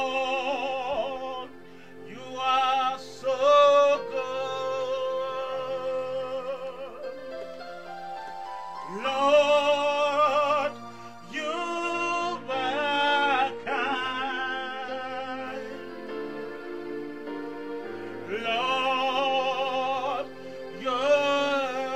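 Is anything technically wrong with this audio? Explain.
Yes. From 11.45 to 15.45 s the treble abruptly disappears above 12.3 kHz, with no gap. This is an adaptive stream at a lower bitrate, stepping down when the connection slowed.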